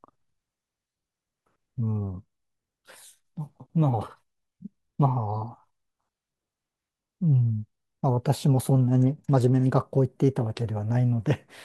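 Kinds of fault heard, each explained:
Bluetooth SBC bit pool drop: from about 8.88 to 9.84 s the speech suddenly goes dull and grainy, as if someone threw a blanket over the top end and sprinkled grit on what's left. That's the encoder squeezing its bit budget on a busy radio link, so the highest sub-bands get starved and the rest are quantised roughly. The sound fits a fall from a bit pool of 28 to 12, around 96 kbps, before recovering.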